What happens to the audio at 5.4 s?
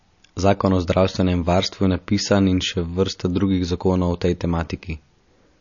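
At 5.4 s the speech carries the same damage heard throughout the clip, likely MP3 compression at a low bitrate, around 37 kbps. Nothing remains above 7 kHz, and weak frequency components drop in and out between frames, giving a plainly audible watery, swirling texture.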